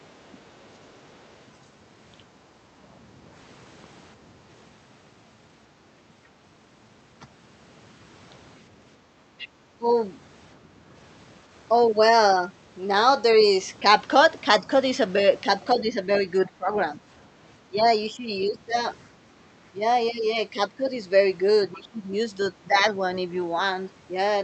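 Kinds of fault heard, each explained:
Other side's voice leaking through: echo cancellation likely missed some loudspeaker playback, leaving a faint second voice at the opening and brief, louder scraps later.
Speech suppressed in double talk: with both sides talking, the canceller likely turned the talker down too, causing short dips and longer stretches near the end.
Background gated by the echo canceller: the canceller clamped the microphone during loudspeaker playback, dropping the room sound by about 7 dB for a moment.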